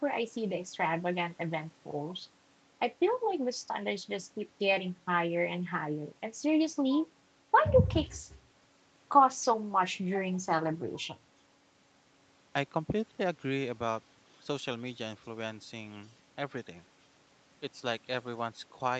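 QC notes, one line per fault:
No faults found.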